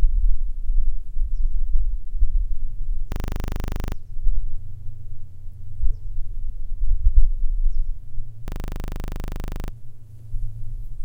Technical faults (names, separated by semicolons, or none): system hang loop